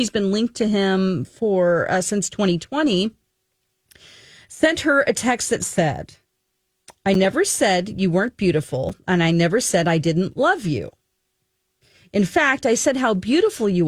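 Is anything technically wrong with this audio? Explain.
Yes. The speech drops out twice in blocks of digital silence, at 7.14 s and 8.89 s. The first gap lasts about 8.5 ms, the second about 5.8 ms, which fits a 256-sample buffer. Each time a run of samples was written as zeros, as when the output buffer isn't filled in time. The signal stops and restarts with no fade, so each hole is heard as a tick or dip.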